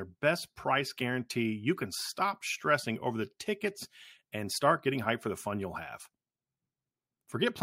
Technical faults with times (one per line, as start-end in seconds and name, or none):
none